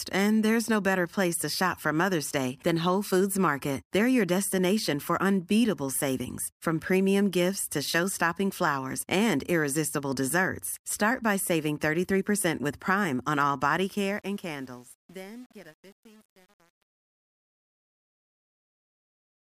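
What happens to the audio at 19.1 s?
At 19.1 s the tail of the speech fade-out sounds gritty. This is truncation distortion on a fade, running from 13.77 s to the end and worst from 14.14 s. The fade stage keeps too few bits (the coarse steps fit roughly 8-bit resolution) and adds no dither. The quiet waveform collapses into square steps.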